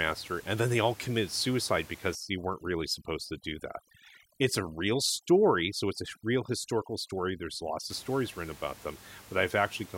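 From 2.15 s to 7.9 s there is overdone noise removal. A noise reduction stage is working far too hard here. It pulls individual frequency bands right down whenever they sit close to its idea of the noise. Soft parts of the speech get caught and vanish too. The room noise, about 21 dB below the speech, drops and breaks up into twinkling specks.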